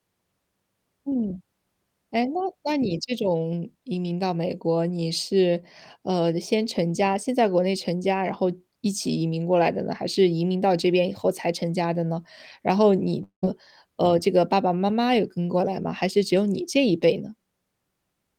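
Speech clip with a long network dropout from 13.23 to 13.44 s, likely from lost packets: about 200 ms missing, concealment buzz fading to roughly 110 ms of silence before audio resumes.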